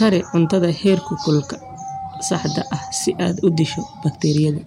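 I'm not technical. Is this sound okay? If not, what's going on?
No. The speech has hard clipping: from 0.02 to 0.95 s, and again from 3.47 to 3.61 s just after "ah si aad u", the loudest moments were too big to pass, so their tops were sliced flat. That adds crackle only on loud peaks, unlike steady hiss.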